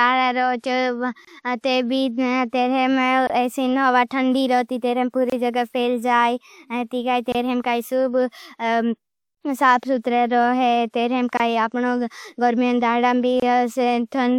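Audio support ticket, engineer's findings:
Hiss leading into a soft, smeared onset, 0.58–0.64 s, spread over 52 ms. Pre-echo: transform codec spreads block quantisation noise sized for the loud attack back into the quiet lead-in.

Short 25 ms holes at 1.25, 3.27, 5.30, 7.32, 9.35, 11.37 and 13.40 s. Gap between chunks: silence inserted at each 2.0 s chunk join, from codec padding or late chunk start.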